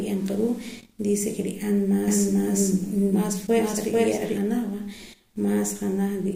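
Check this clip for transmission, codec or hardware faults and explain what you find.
One fault is present. From 2.08 to 4.38 s, the speech is doubled, with a second, equally loud copy trailing about 400 ms behind. This doubled audio track is likely from a slower capture path adding a second copy.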